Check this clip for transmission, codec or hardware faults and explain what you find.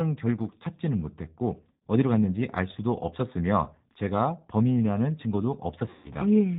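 Two faults are present: G.729 codec coding throughout, and two stretches of VoIP packet loss concealed by the speech codec.

The G.729 codec runs the whole clip at 8 kbit/s, rebuilding speech from a filter and sparse pulses, so there is nothing above 4 kHz and the speech sounds plainly rough and synthetic.

VoIP packet loss concealed by the speech codec occurs at 1.73–1.82 s (about 90 ms lost) and 5.90–6.12 s (about 150 ms lost). The decoder extends its last pitch and filter, producing a fading buzzy tone or coloured noise before normal speech recovers.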